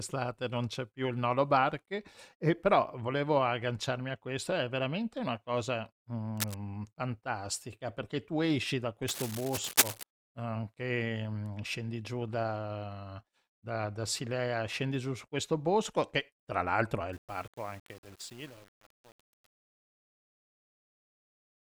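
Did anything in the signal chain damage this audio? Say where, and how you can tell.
Yes. Scratchy, rustling bursts of cable scratch noise cut across the speech at 6.36 to 6.55 s, just before "fantastica perché tu esci", and at 9.08 to 10.03 s, right after "perché tu esci da", the second as loud as the speech. This is likely a worn connector or cable in the analogue wiring whose contact resistance jumps as it moves.

The closing fade-out, after "che tra l'altro è", turns grainy from 17.13 s to the end at 21.75 s. This is truncation distortion on a fade. The gain stage drops bits without dither, consistent with roughly 8-bit resolution, so the quietest samples collapse into coarse square steps at the sample-format conversion.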